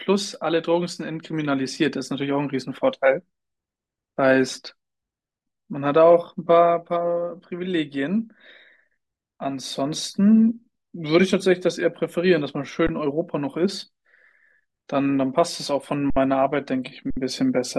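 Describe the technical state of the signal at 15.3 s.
At 15.3 s the speech plays through intact, with no dropout, glitch or other fault at that point.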